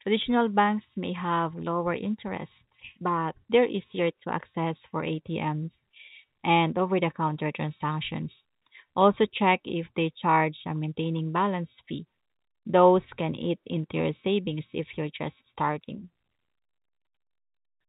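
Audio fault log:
No faults heard anywhere in this speech recording.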